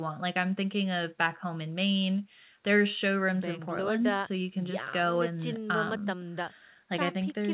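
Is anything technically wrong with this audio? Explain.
No, nothing stood out as technically wrong on listening to this speech clip.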